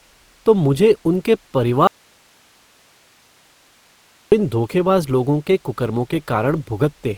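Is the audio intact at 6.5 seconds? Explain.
No. At 6.5 seconds, as throughout the clip, the speech sounds grainy and rough, with a noisy texture where harmonics should be clean. That points to Opus compression, likely in its music (CELT) mode at a rate that fits about 24 kbps. When bits run short, the encoder keeps each band's energy but fills detail with folded or noise-like content, so tones turn coarse. Bandwidth stays full, reaching about 20.4 kHz.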